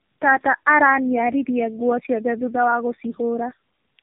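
Tandem speech coding runs through the whole clip. The speech sounds rough, muffled and warbly from start to end. Nothing reaches above 3.4 kHz. The damage is heavier than one narrowband codec would leave. It points to three AMR-NB passes in a row, with G.711 mu-law links between them. Each border decodes the speech and codes it again. Every new coder works on the previous coder's errors. The artefacts pile up with each pass.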